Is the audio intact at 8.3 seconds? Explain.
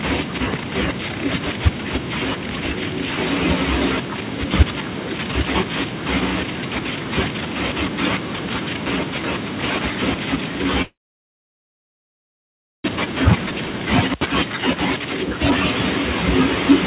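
Yes, at 8.3 seconds the speech is intact, with no dropout, glitch or other fault, only the narrow telephone-band sound of the call path, which carries nothing above 4 kHz.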